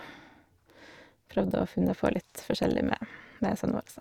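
From start to finish, the speech carries overlap-add ripple. The signal was processed in overlapping windowed frames, and when those frames were summed back together the window overlap did not add up to a constant gain, so the level dips and recovers once per frame. The modulation is about 6 dB deep and repeats at around 300 Hz, fast enough to be heard as a metallic buzz rather than a flutter or tremolo.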